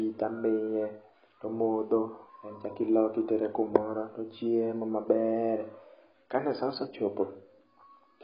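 Speech, heavily degraded throughout by what is likely AAC compression. Nothing sounds above 5.3 kHz, leaving it dull, smeared and fizzy, which fits a low bitrate near 16 kbps.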